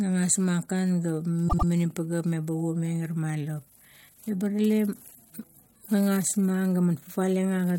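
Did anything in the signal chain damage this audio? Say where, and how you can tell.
Yes, there's a case of repeated frames in the compressed stream, either at storage or in transit to the decoder. From about 1.48 to 1.67 s the speech stutters: a roughly 96 ms slice plays, then plays twice more, which fits a short run of about four codec frames being written or sent again. The decoder just plays what it's given, so that slice comes back and the clip runs about 192 ms longer than it should.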